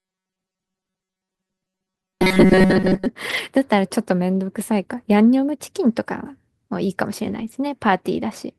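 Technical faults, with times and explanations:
0.01 to 3.06 s, robotic sound from repeated short buffers: the speech becomes a rigid, metallic buzz pitched at 188 Hz that still loosely tracks the syllables. A fixed pitch like this, imposed regardless of what the talker does, is the signature of playback looping the same sliver of audio, with most of the material, around 70 percent, being repeats instead of fresh signal. The likely cause is audio arriving too slowly, so the player recycles its last buffer; a 188 Hz buzz fits a buffer of about 5.3 ms.
3.29 to 3.39 s and 7.27 to 7.57 s, lost packet rebuilt from error correction: there is no dropout, but the speech briefly turns grainier and noisier, for 60 ms in the first spot and 160 ms in the second. That roughness comes from the decoder playing low-bitrate backup copies carried in the following packets in place of the missing originals, which matches roughly three and eight lost 20 ms packets respectively.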